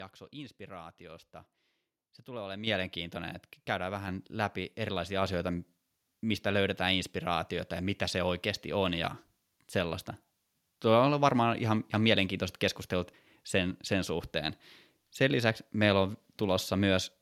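Automatic gain control on the microphone raised the device's input volume in single steps, a microphone volume stepped up fault. At 2.67 s, after "tulee olemaan", speech and background jump together by about 8 dB. At 4.08 s, between "että käydään" and "läpi erilaisia asioita", they rise another 4 dB.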